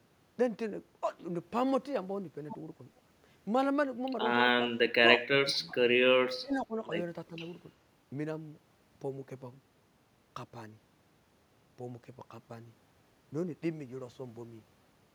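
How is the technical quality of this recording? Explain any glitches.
The recording has three brief dropouts, from 4.69 to 4.81 s, 5.47 to 5.77 s, and 6.41 to 6.76 s. These are likely speech suppressed in double talk: the echo canceller mistook the talker's speech, overlapping the far-end echo, for echo and ducked the talker, by roughly 25 dB, then 15 dB, then 25 dB.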